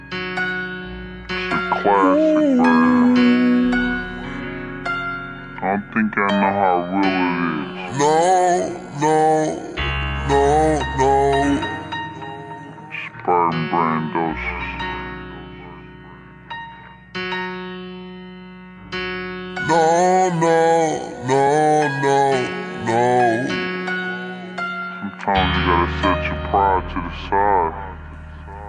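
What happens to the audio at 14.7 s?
At 14.7 s the audio is affected by a wrong sample rate, a fault that runs through the whole clip rather than appearing at that moment. Samples are being clocked out slower than they were captured, which fits audio made at 48 kHz played at 32 kHz, so everything runs at about two-thirds speed and sits roughly 7 semitones low. Pitch and tempo fall together by the same ratio, which separates this from a pitch shift or time-stretch, where one changes without the other.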